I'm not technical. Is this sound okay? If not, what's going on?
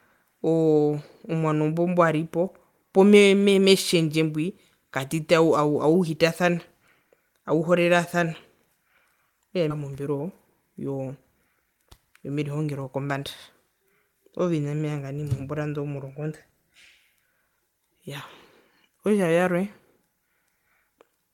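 No. At 9.70 s the speech suddenly jumps forward, with about half a second missing and the two sides joined almost seamlessly. This is a skip ahead: a chunk of delayed audio was thrown away so playback could catch up with sound already waiting.

From 11.56 to 13.14 s the speech sounds hurried, running about 12% faster at the same pitch. This is a jitter buffer speed-up: the receiver had too much audio stored, so it trimmed many tiny slices, around a fifth of a second in total, to reduce the delay.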